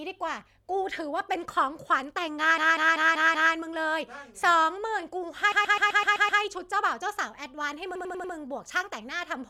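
A stuttering loop occurs at 2.58–3.54 s, 5.52–6.42 s and 7.95–8.34 s. These are repeated frames: blocks of 192, 128 and 96 ms of compressed speech replay 5, 7 and 4 extra times, adding 0.96, 0.90 and 0.38 s.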